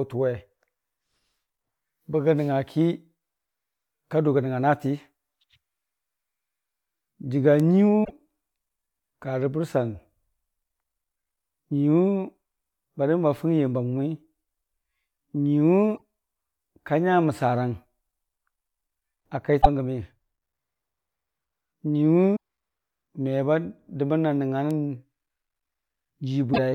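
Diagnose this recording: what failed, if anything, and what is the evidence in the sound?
Five short glitches break into the speech, at 8.01–8.10 s, 15.92–16.02 s, 19.58–19.66 s, 22.32–22.37 s and 26.50–26.59 s, each lasting roughly 50 to 100 ms. The fault sits at the codec or storage stage: damaged data in a compressed stream. Corrupted bytes make the decoder misread those frames and lose sync until it finds the next valid frame header, so each event is a brief disruption in the sound.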